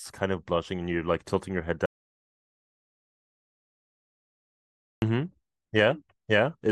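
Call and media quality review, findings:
Audio dropout to silence, 1.86 s to 5.02 s. Speech cuts out mid-flow, 3.16 s of silence, no room tone. Likely input loss (device disconnect, link failure or mute) while the encoder kept writing silence. Speech in the gap is lost.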